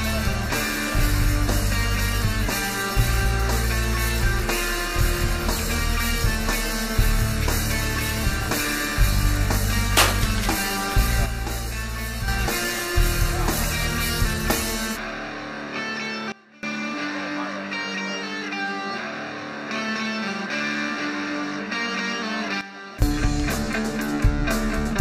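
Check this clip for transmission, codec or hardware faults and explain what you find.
Three sudden gain jumps, each a level drop. At 11.26 s the sound and its background noise fall together by about 6 dB until 12.28 s. At 16.32 s they plunge by about 22 dB until 16.63 s. At 22.61 s they drop by about 12 dB until 23.02 s. Each change is a hard step, not a fade, most likely from a digital gain setting or bit shift applied between adjacent samples without any ramp.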